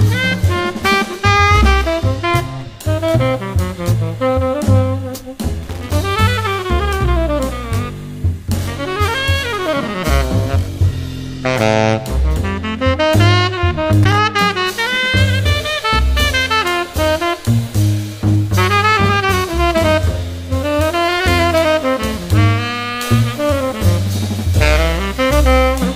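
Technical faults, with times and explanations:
5.63 to 5.95 s and 14.03 to 14.18 s, loose connector crackle: two short, irregular bursts of scratchy crackle, the first lasting about a third of a second and the second about 0.15 s. A worn or dirty contact somewhere in the signal path is shifting and rapidly losing and regaining connection. Each break chops the audio into fragments, and any DC on the line turns those interruptions into sharp pops. The result is the ragged, grating texture heard in both places.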